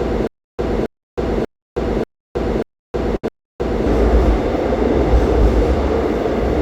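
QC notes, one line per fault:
0.00–3.86 s, stutter with silent gaps: already under way at the start, a 271 ms burst repeats six times every 588 ms, separated by about 317 ms of digital silence. The likely cause is a stalled stream replaying its last fragment. On the waveform, identical blocks alternate with flat lines.
3.16–3.24 s, short stall from a late packet: the last sound is held for 70 ms until delayed data arrives, and everything after it shifts 70 ms later. On the spectrogram this appears as a frozen, horizontally smeared patch.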